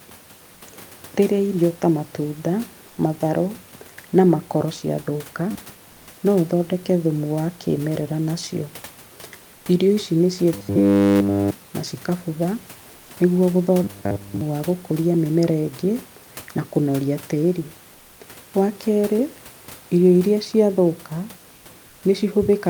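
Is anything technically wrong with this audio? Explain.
Yes. From 10.54 to 11.55 s, just before "na cikabutha", late audio likely forced repeats of a roughly 10 ms buffer: robotic sound from repeated short buffers, a rigid 100 Hz metallic buzz over the speech. At 0.53, 2.87, 9.55, 12.95 s (after "na cikabutha") and 21.55 s (after "irio iria ciathũka"), likely discontinuous transmission puts comfort noise in place of the background for 80 to 140 ms: flat, featureless hiss, about 1 to 2 dB quieter.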